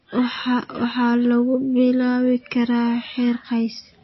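From start to finish, the speech has nothing above 5.8 kHz. The treble stops at a hard ceiling. Weak frequency detail flickers in and out between frames. The result sounds watery and swirly, with metallic chirps on the s sounds and smeared attacks. The damage is plainly audible. The likely cause is MP3 compression with too few bits. The encoder dropped the top band and zeroed faint components it judged unimportant. The damage fits a stream of about 24 kbps.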